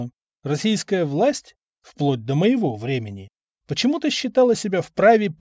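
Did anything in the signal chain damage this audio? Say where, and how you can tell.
No, nothing in this audio points to damage at any stage of the chain.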